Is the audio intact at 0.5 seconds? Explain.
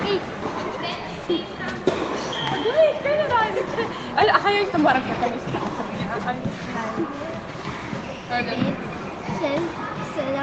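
Yes, the audio is intact at 0.5 seconds, with no fault there beyond the normal band-limiting of a call path that leaves nothing above 8 kHz.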